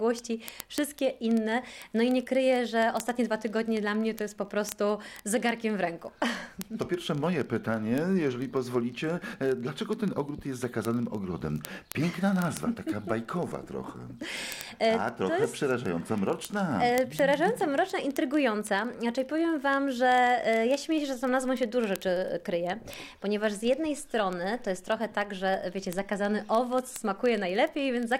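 From 0.13 s right through to 28.18 s there's a steady stream of word clock ticks, sharp clicks landing roughly every 30 ms, so around a thousand of them across the run. The receiving device is free-running on its own clock instead of locking to the incoming digital feed, and the two are off by something like 700 ppm. Every time they slip past each other, a single sample gets dropped or doubled, and you hear that as a tick.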